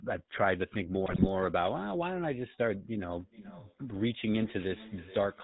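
The speech runs through the GSM full-rate codec for its whole length: a buzzy, gravelly roughness from the pulse-train excitation and nothing above 4 kHz, which fits a 13 kbps full-rate channel rather than a smooth band-limited line. From 1.06 to 1.27 s, GSM bit errors make the speech break into squawks and gargling. Corrupted filter, pitch and gain values distort the spectrum and level for roughly ten consecutive frames, rather than leaving a silent or repeated gap as a dropped frame would.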